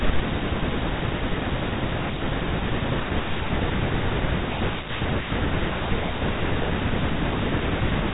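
No technical faults can be heard in this speech recording; it carries the narrow band of G.711 telephone coding, with nothing above about 4 kHz.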